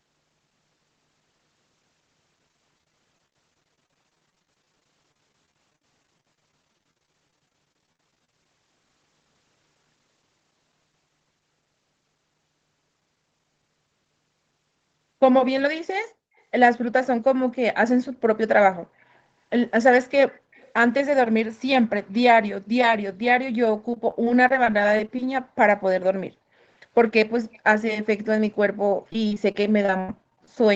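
Speech runs through a call chain here, with its top end stopping around 8 kHz, which fits Opus at a modest bitrate. The main problem is repeated packet loss (robotic sound) from 2.48 to 8.46 s, 23.94 to 25.19 s and 28.86 to 30.57 s. Audio keeps dropping out in short holes, each papered over by stretching the last bit of sound. That gives a choppy texture with pieces missing. The first stretch is the worst, with roughly a fifth of it concealed and gaps up to 51 ms. The last has the longest single hole at 80 ms. There's also a faint echo leak, a delayed copy of the talker arriving about 263 ms late, at 18.99 to 19.04 s, 20.29 to 20.68 s and 27.53 to 27.59 s. It sits well below the speech, barely audible at first and a bit stronger by the last scrap. The likely cause is a loudspeaker on one side whose echo canceller let some pickup slip back into the call.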